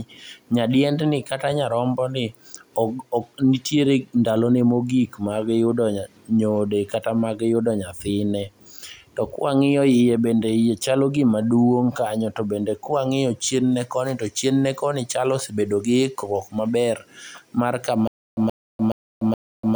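Likely a stalled stream replaying its last buffer: from 18.08 s to the end, a stutter with silent gaps repeats a 126 ms burst four times, separated by 295 ms of silence.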